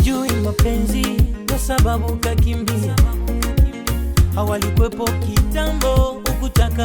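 No technical faults can be heard in the clip, so there are none to describe in time order.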